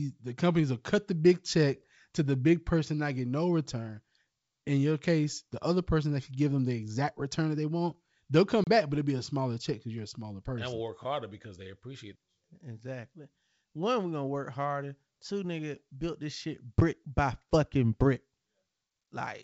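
At 8.64 to 8.68 s, packet loss on an ADPCM call drops roughly 30 ms of the G.722 wideband stream. The lost packets leave a hard-edged silent hole, and the decoder's predictor and step size lose track of the sender, so "back but it'll be" resumes with brief distortion.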